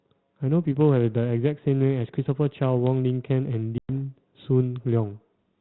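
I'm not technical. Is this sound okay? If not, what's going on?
No. At 3.78 s the speech cuts to sudden silence for about a tenth of a second, then comes back at 3.90 s slightly distorted. This is packet loss on an ADPCM call: roughly ten chunks of the phone signal went missing. The receiving end briefly lost track of how loud and how fast-changing the sound was, until it caught up again.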